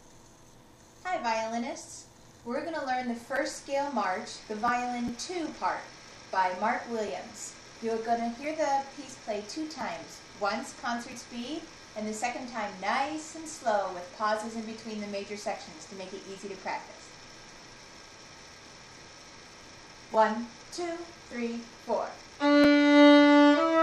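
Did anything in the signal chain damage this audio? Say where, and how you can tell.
No, nothing damaged this audio.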